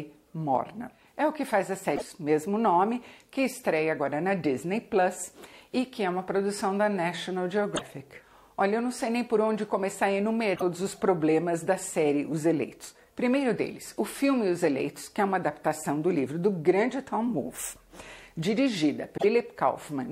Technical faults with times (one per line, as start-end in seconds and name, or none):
1.92-2.02 damaged data in a compressed stream
7.72-7.82 damaged data in a compressed stream
10.52-10.63 damaged data in a compressed stream
19.14-19.24 damaged data in a compressed stream